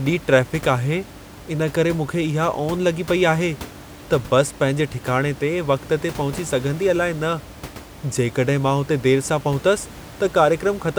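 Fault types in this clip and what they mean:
No technical faults are present in this speech recording.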